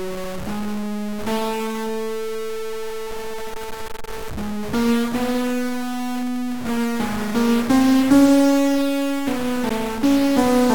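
A piece of music with a stuck bit running the whole way through: there's a distortion riding on everything, and the quiet stretches don't fall silent but fill with a noisy hash, so it's likely one data bit held at a fixed value by a broken line or converter. Then at about 9.69 s there's a gap at a join of encoded pieces, a tiny dropout of roughly 12 ms with softened edges, where two separately encoded chunks were butted together untrimmed and the music picks up right where it left off.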